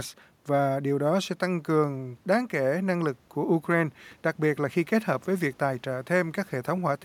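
No technical faults occur at any point in the recording; the only background is the room's own noise, about 36 dB below the speech.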